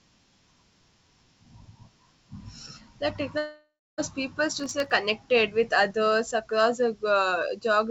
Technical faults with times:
3.38-4.01 long network dropout
4.60-4.92 processor overload crackle

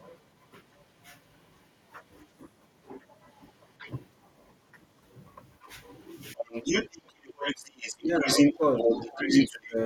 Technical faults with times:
3.00-3.06 other side's voice leaking through
3.78-3.92 other side's voice leaking through
4.72-4.78 other side's voice leaking through
5.60-5.96 other side's voice leaking through
6.35-6.46 speech suppressed in double talk
6.37-9.66 other side's voice leaking through
7.17-7.22 speech suppressed in double talk
7.63-9.77 speech suppressed in double talk

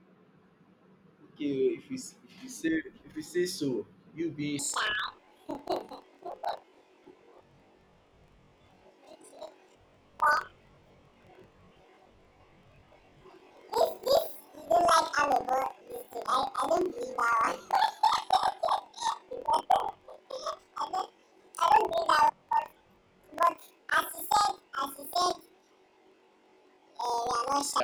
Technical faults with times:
4.59-27.84 planar audio read as interleaved

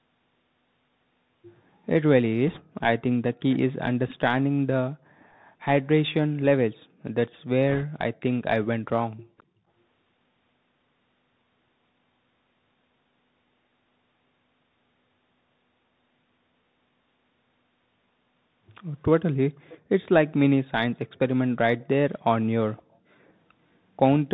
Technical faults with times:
0.00-24.34 Bluetooth CVSD headset codec
2.48-2.61 bit errors on a Bluetooth voice link
3.34-3.59 echo leak
7.70-7.84 bit errors on a Bluetooth voice link
9.38-9.43 echo leak
19.69-19.79 echo leak
21.15-21.19 echo leak
22.76-22.96 echo leak
23.27-23.32 echo leak

